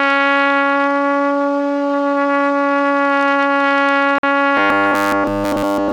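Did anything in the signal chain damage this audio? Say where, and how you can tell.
Yes. A gap between stream segments occurs at the playback or streaming stage. From 4.18 to 4.23 s the sound drops out for about 50 ms, with abrupt edges. Two segment timestamps failed to meet, and the player filled the hole with silence. Nothing was lost.

Robotic sound from repeated short buffers starts at 4.57 s and runs to the end. The audio becomes a rigid, metallic buzz at a fixed 100 Hz throughout. That rate fits a 10 ms chunk being replayed. The likely cause is a driver or buffer underrun.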